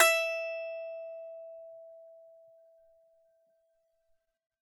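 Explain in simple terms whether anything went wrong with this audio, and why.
Listening to this piece of music, nothing stood out as having gone wrong.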